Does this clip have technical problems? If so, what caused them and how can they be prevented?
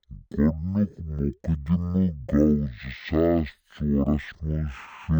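Yes. The whole clip shows stereo read as mono: a two-channel file's interleaved left and right samples were taken one after another as a single channel. Each moment then occupies twice as many samples, so the speech plays at 0.5 times speed and drops 12 semitones, a full octave, throughout. A fainter mirrored copy of the content sits in the upper half of the spectrum. Prevent it by reading the channel count from the file header and de-interleaving or downmixing before playback.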